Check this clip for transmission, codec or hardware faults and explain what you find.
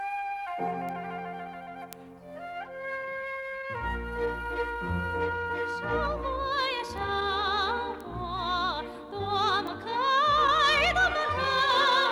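Five sharp, isolated ticks punctuate the sound at 0.89, 1.93, 6.98, 8.01 and 9.67 s. Each is a single-sample bit error spike, broadband and unrelated to the surrounding audio. The loudest, at 1.93 s, peaks near about -10 dBFS, and the faintest, at 6.98 s, near about -28 dBFS. A single flipped bit in memory or on a digital link pushes one sample's value away by a power of two before it snaps straight back.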